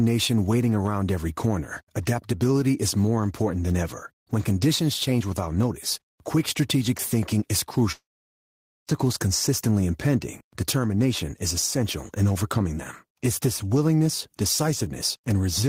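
All the way through, the gain swings by roughly 10 dB. That's gain pumping, likely from the input gain sitting way too hot and a fast limiter clamping down, so everything sounds squashed.

Right after "quick strategic thinking is", at 7.92 s, the audio gives out until 8.90 s. It's a long network dropout, likely packets never arriving. A fading buzz or hiss carries on from the last sound, then it's near-silence before "consistently impending determination is" picks up with the gap missing.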